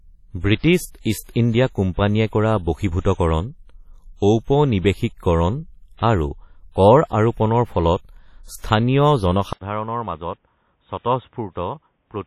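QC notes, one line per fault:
throughout: WMA compression, heavy. The sound rings and washes, with a hiss that rises and falls with the signal, and nothing is left above 15.9 kHz. That points to a transform codec with long blocks, likely WMA at a low rate around 32 kbps: quantisation noise spreads across tens of milliseconds around each sound and weak spectral lines drop out. This smearing runs through the whole clip, not starting at one moment.
9.53–12.26 s: input switched to a poorer device. After a gap of 80 ms, the sound turns dull and boxy, with nothing above 3.8 kHz. The level drops by roughly 10 dB, and a new background noise sits roughly 45 dB below the signal. The likely cause is the recording input changing mid-take to a narrower-band microphone or headset profile. A plain filter or codec change would not also bring the gap, the level step and the different noise floor.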